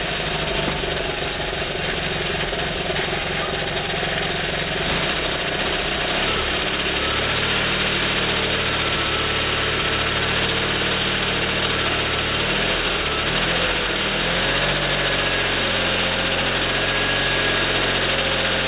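Aliasing runs through the whole recording. Everything above about 4 kHz has folded back down below that edge as wrong, unrelated tones, strong enough to sit close to the level of the real sound, so bright content turns gritty and metallic and the spectrum stays dense right up to 4 kHz. That fits a rate drop from 44.1 kHz to 8 kHz with no anti-aliasing filter beforehand. A properly filtered downsample would only sound dull, without these inharmonic, clashing components.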